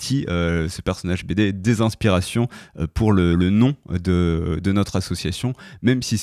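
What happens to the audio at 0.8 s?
Nothing goes wrong at 0.8 s; the speech carries on intact through that moment, with no dropout, click or distortion.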